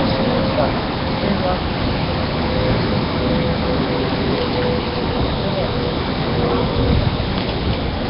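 Throughout the clip the sound was likely squeezed through Nellymoser compression, the old Flash microphone codec, at a low rate; the damage suggests a bitrate somewhere around 22 kbps. Working in short fixed blocks with very few bits per sample, it leaves weaker bands unfunded and patches them with noise, and nothing survives above about 5.3 kHz. The result is a dull, band-limited sound wrapped in a rough, hissy halo, with a smeared, underwater blurring that never lets up.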